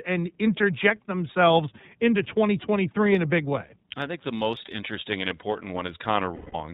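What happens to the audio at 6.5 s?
Lost iLBC frames run from 6.35 to 6.55 s. About 180 ms of packets drop out, which fits six 30 ms frames, and the decoder fills the hole by repeating the last pitch cycle blended with noise and fading it. The result is a held, slightly buzzy, breathy vowel, after which the sound snaps back almost at once because each frame decodes independently.

The iLBC codec shapes the whole clip, including this moment. The audio is narrowband, with nothing above 4 kHz, and carries a plainly audible rough, synthetic texture from coding each frame's excitation on its own. That texture fits the 13.33 kbps, 30 ms mode.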